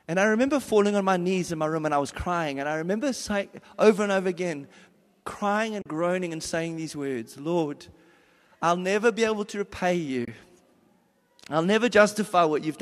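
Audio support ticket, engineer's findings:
AAC frame loss with muting: 5.82–5.86 s, 40 ms hole between "and over again crying" and "groaning and saying these"; 10.25–10.28 s, 30 ms hole after "be able to repay". Soft-edged dropouts. This fits three to four 10 ms frames zeroed by the decoder, with the overlapping windows fading the audio out and back in. Light codec texture on the speech, likely from low-delay AAC at 64 kbps.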